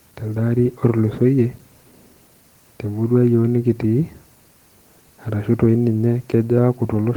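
No technical faults can be heard anywhere in the recording, and the signal stays steady and intact throughout.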